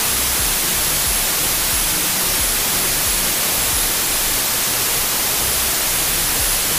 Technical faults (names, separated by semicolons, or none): wrong sample width